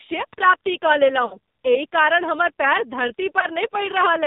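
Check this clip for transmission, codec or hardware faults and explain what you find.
Two faults: the speech went through a heavily compressed AMR narrowband mobile codec, and it has two runs of lost AMR speech frames.

AMR narrowband mobile codec, throughout: the encoder samples at 8 kHz and rebuilds the voice from a vocal tract model excited by a few pulses per subframe. Nothing above 4 kHz survives, so the speech is muffled and boxy. The damage is heavy, with a buzzy, synthetic quality that points to one of the lowest AMR modes, around 5.9 kbps.

Lost AMR speech frames, 1.26 to 1.37 s and at 3.40 to 3.47 s: radio errors corrupted frames, and the decoder filled the gaps by repeating its last good pitch and vocal tract settings at falling gain. The first gap spans about 60 ms, which fits three consecutive lost frames. There the sound smears and sags toward silence before recovering roughly. 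The second, about 20 ms and consistent with a single frame, is a brief dip or warble.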